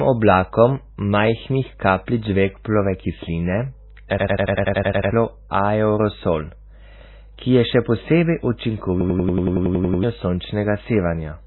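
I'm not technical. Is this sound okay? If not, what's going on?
No, it has two problems.

The whole clip sounds muffled and watery, with nothing above about 4 kHz, so the crisp top end of the speech is gone and consonants like s and t lose their bite. That's heavy MP3 compression damage, likely from squeezing the file very hard: the encoder threw away the treble and the quieter detail, which leaves that swirly, underwater quality.

Twice, the sound gets stuck and stutters like a machine gun: from 4.18 to 5.11 s (10 repeats) and from 9.01 to 10.03 s (11 repeats). That's a system hang loop. The computer froze for a moment while the sound hardware kept replaying the same tiny chunk, about 93 ms long, roughly 11 times a second. Each time, around a second of real audio is lost.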